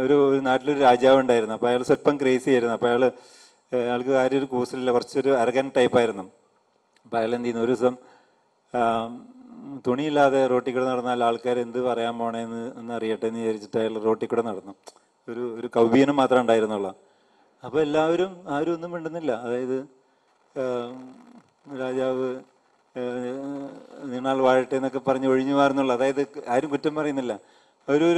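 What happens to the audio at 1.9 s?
A brief jumbled smear runs from 1.86 to 1.89 s. These are chunks out of order: one 5.8 ms chunk plays three chunks late, after the ones meant to follow it. Nothing is lost, but the reshuffle leaves three hard joins.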